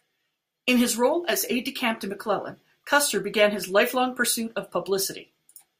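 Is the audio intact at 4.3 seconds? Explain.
Yes, the speech at 4.3 seconds plays through cleanly, with no audible fault at that moment.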